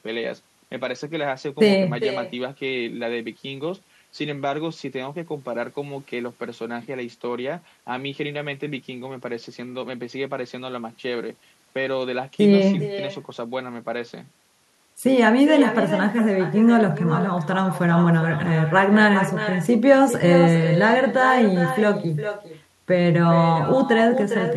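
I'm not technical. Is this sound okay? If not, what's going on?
No. Throughout the clip, every bit of speech is followed about four tenths of a second later by a quieter, thinner copy. This is echo with no canceller: the far end's microphone picks up its loudspeaker and sends your voice straight back.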